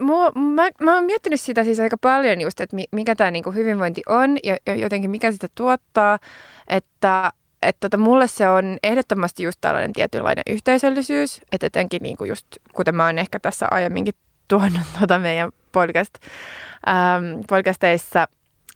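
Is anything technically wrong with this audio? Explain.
Yes, there are two faults. At 7.15 to 7.26 s, a short stall from a late packet: the receiver stretched the last sound by 74 ms until the packet arrived, so a sound hangs briefly with a slight buzz or dip. From 12.24 to 12.97 s, a jitter buffer speed-up: about 70 ms of pitch periods were trimmed, so the speech runs at 109% speed and sounds hurried at unchanged pitch.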